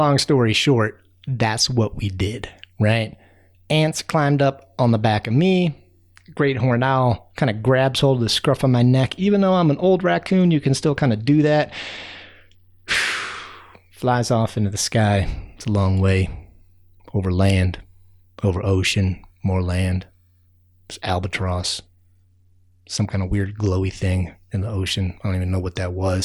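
Twice in this speech clip the Bluetooth link takes a hit: from 10.23 to 12.94 s, and again from 21.42 to 23.63 s, you get an SBC bit pool drop. The top sub-bands are starved and everything else is coarsely quantised, so the treble goes dull and a gritty noise creeps in before clarity snaps back. That fits the bit pool falling from about 31 to 13, roughly 94 kbps.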